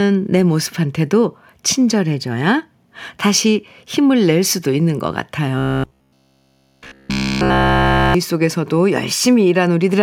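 From 5.58 to 8.14 s the speech turns into a rigid metallic buzz at 66.8 Hz: robotic sound from repeated short buffers, likely 15 ms chunks repeated over and over.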